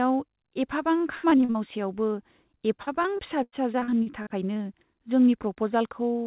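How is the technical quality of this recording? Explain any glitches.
Quality suffers from repeated packet loss (robotic sound) in two stretches, 0.98–1.57 s and 2.57–4.59 s. Packets kept arriving late or not at all, and each hole was patched by extending the preceding sound. The speech turns choppy, with pieces missing. The first stretch is denser, with about 39% concealed and gaps up to 77 ms. The second has about 20% concealed and gaps up to 98 ms. Throughout, the narrow telephone band with nothing above 4 kHz fits a G.711 A-law call path.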